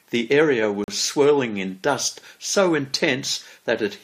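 A short speech recording with a gap between stream segments: two segment time stamps fail to meet, so the player fills about 40 ms with silence, a hard-edged hole from 0.84 to 0.88 s.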